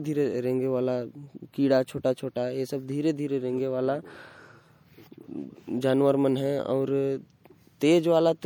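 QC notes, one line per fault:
Throughout, MP3 compression: the speech has a plainly audible watery, swirly quality, with weak detail flickering in and out and a metallic edge on s sounds. That's likely a low-bitrate MP3 encode, around 64 kbps, though content still reaches about 21.1 kHz.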